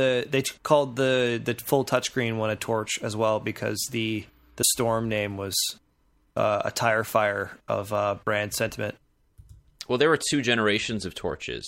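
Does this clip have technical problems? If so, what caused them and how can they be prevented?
Yes. Damaged data in a compressed stream at 4.61 to 4.64 s, between "as well because the" and "name was": corrupted frames made the decoder lose sync, producing a brief blip. Prevent it by using checksummed transport or storage and verifying files before playback.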